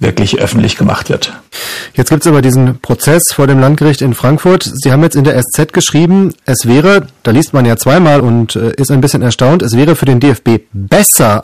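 A harsh fuzz rides on every loud syllable of the speech for the whole clip, from hard clipping: the signal is driven about 13 dB past what the stage can pass, so roughly 15 percent of samples are sliced flat, spraying high harmonics across the spectrum.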